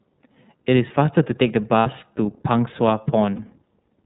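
Right from the start the whole thing runs through the iLBC codec: everything above 4 kHz is gone, and the speech has a plainly audible rough, slightly synthetic edge. The damage fits iLBC's 13.33 kbps mode with 30 ms frames, each coded on its own.

At 1.80 to 1.87 s you get lost iLBC frames. About 60 ms of audio drops out, which fits two missing frames, and the decoder covers it by repeating the last pitch cycle mixed with noise, so it comes across as a brief buzzy held vowel. It happens again at 3.36 to 3.40 s with a shorter 30 ms patch, about one frame's worth. Each time the voice snaps straight back because the next frame doesn't depend on the lost ones.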